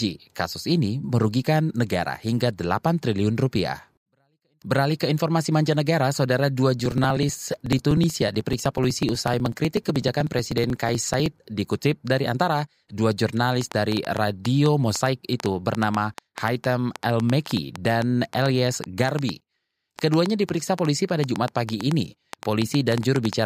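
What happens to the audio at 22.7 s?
Likely interference or a faulty connection injects a train of clicks from 13.61 to 23.34 s, after "dikutip dari antara dua": irregular, about 5.8 per second, ticking well above the speech.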